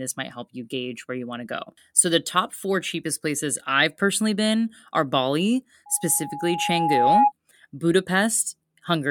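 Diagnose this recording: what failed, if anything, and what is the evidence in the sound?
A single pure tone near 829 Hz rises out of the speech at 5.86 s, swelling over about a second and a half until it sits roughly 10 dB above the speech, then stops at 7.32 s. This is loudspeaker feedback squeal, a failure in the acoustic loop between playback and the microphone. The microphone picked up the loudspeaker it was feeding, and at 829 Hz the loop gain passed one, so that frequency kept reinforcing itself until the loop was broken.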